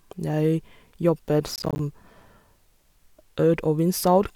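Processor overload crackle runs from 1.54 to 1.79 s, a stretch of about a quarter of a second in which the speech breaks into a gritty, tearing crackle. The processing clearly fell behind its deadlines here, failing to deliver roughly ten buffers of around 10 ms each. Each missed buffer was filled with silence, so the audio keeps dropping out and snapping back in with hard edges, and those rapid clicks merge into a rough burst that stops once the load eases.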